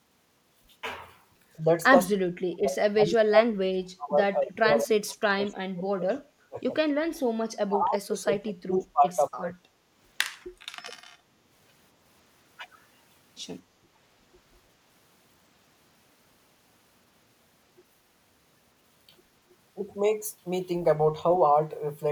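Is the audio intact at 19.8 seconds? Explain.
No. From 19.75 to 19.79 s, speech suppressed in double talk: an echo canceller likely mistook overlapping talk for echo and attenuated it, so the speech briefly dips by about 15 dB.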